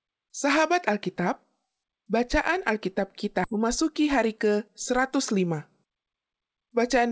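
A skip ahead at 3.44 to 3.46 s drops about a second of speech. Later audio was already queued, and the stretch before it was discarded, either lost in transit or thrown out when the jitter buffer overflowed. Nothing fills the gap. Playback jumps straight from one side of the missing second to the other, so the speech is cut mid-flow and resumes further along, with the join audible as an abrupt splice.

A jitter buffer speed-up then runs from 3.53 to 6.48 s, with the speech playing at about 107% of normal rate. After the skip, the buffer still held more audio than its target, so the receiver trimmed many short slices, each one or a few pitch periods long, to bring the delay back down. Altogether about a fifth of a second is removed. Because whole periods are cut, the pitch stays put while the delivery sounds slightly hurried. The speech is band-limited with nothing above 8 kHz, which fits G.722 at 64 kbps.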